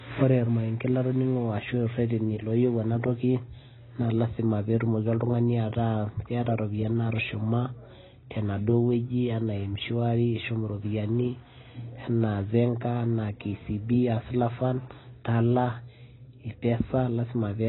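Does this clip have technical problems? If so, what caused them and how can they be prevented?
Yes. Throughout the speech, nothing is present above 3.9 kHz, and the sound is dull and smeared, with a warbling, fizzy texture on sibilants. This is heavy AAC compression damage, likely from AAC-LC at a very low bitrate, consistent with about 16 kbps. Starved of bits, the encoder discards the upper band and quantises the remaining spectrum coarsely. To prevent it, encode at a substantially higher bitrate, such as 64 kbps or more.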